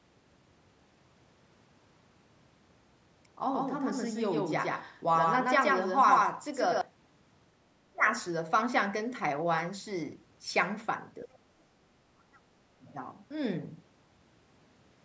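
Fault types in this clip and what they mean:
Doubled audio track: The same speech was likely captured a second time by a slower path, or an edit left two copies out of step. From about 3.49 to 6.81 s, a full-band copy trails roughly 150 ms behind at about equal level, starting and stopping abruptly with no room colour.
Speech suppressed in double talk: With both sides talking at once, the echo canceller likely could not separate the talker from the loudspeaker echo, so it turned everything down. The voice dips briefly near 7.9 and 11.3 s, and for about half a second from 12.15 s, by up to roughly 35 dB.
Other side's voice leaking through: The far side, played over the talker's loudspeaker, was likely not fully removed from the microphone by the echo canceller. A brief scrap of that second voice slips through near 12.9 s, very faint, around 40 dB below the talker.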